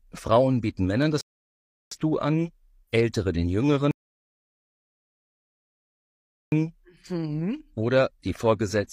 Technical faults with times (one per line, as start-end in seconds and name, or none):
1.21-1.91 rebuffering stall
3.91-6.52 rebuffering stall